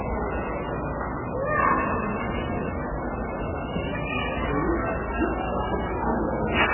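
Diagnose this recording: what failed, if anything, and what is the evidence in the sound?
The codec stage failed, likely heavy MP3 compression. Nothing sits above 3 kHz for the whole clip. The sound is watery and swirly, and attacks smear. That fits a bitrate near 8 kbps, where the encoder cuts the treble and drops weak frequency lines frame by frame.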